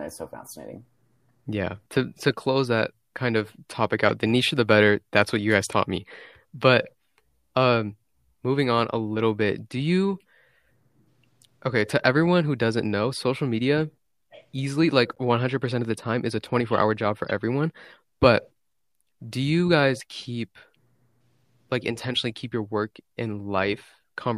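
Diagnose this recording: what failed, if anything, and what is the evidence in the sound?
Codec stage: a corrupt frame was decoded, giving short glitches after "that kind of topic" at 4.09 s, after "easily like" at 15.15–15.17 s, and before "everyone but" at 17.27–17.31 s. Flipped bits put energy at wrong frequencies: brief vertical smears on a spectrogram, waveform spikes near about -15, -45 and -20 dBFS.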